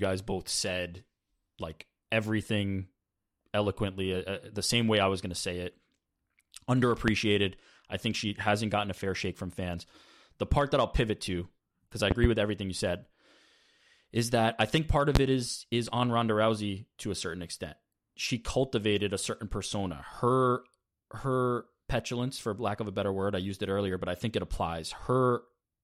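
Loud pops strike at 7.08 to 7.11 s, 12.11 to 12.27 s (a double pop) and 15.15 to 15.19 s, each roughly 20 to 25 dB above the speech. A voltage spike, likely from a plug, switch or static, jolts the signal. Unlike a dropout, the speech carries on underneath.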